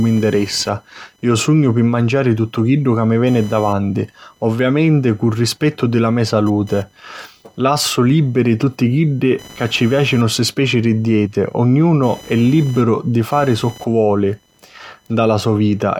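Computer activity noise runs through the whole speech recording as a faint chirping buzz with pulses around 1 kHz, roughly 30 dB below the speech. Processor, graphics or mouse load is shifting the shared ground of the audio circuit, so the noise tracks computer activity rather than the speech.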